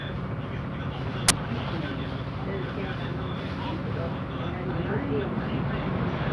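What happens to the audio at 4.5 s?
Nothing goes wrong at 4.5 s; the sound continues intact through that moment with no dropout, click or other fault.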